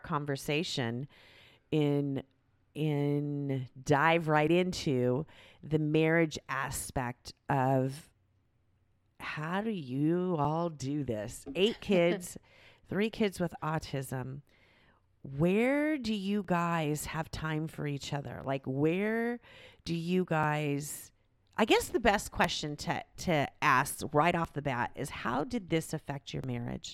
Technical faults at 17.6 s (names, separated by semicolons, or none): periodic USB or driver dropouts